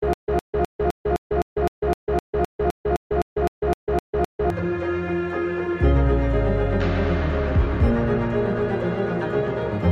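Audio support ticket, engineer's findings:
Stutter with silent gaps, 0.00–4.50 s, already under way at start: 133 ms music fragment repeats 17 times, 124 ms digital silence between, 257 ms period. Likely player/stream stall re-looping last buffer; intervening audio lost.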